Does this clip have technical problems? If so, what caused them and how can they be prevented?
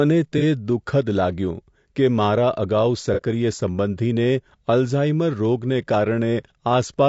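Yes. Throughout the speech there is a rough, grainy texture, with noise filling the gaps between harmonics and a thin, synthetic-sounding top band. This is likely low-delay AAC compression (AAC-ELD) at a low bitrate, and the damage is consistent with something around 32 kbps. Its short frames resolve pitch harmonics poorly, and with too few bits the coder fills the gaps between them with noise. Raising the bitrate to 48 to 64 kbps, or using a longer-frame codec where latency allows, prevents it.

At 0.38 to 0.43 s and again at 3.14 to 3.22 s there are brief smeared, noisy patches from AAC frame loss with concealment. Each gap of about 30 ms points to a single lost frame, which the decoder filled by reusing the previous good spectrum with altered phase, so the sound loses definition and turns briefly phasey. More robust transport with jitter buffering, packet redundancy or forward error correction prevents these losses.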